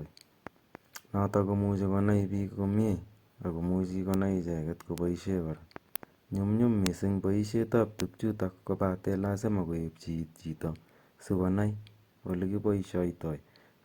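Five bit error spikes land in the speech at 4.14, 4.98, 5.96, 6.87 and 8.00 s. Each is a single flipped bit on one to three samples that throws the value by a power of two before it snaps back, giving a brief broadband tick unrelated to the voice.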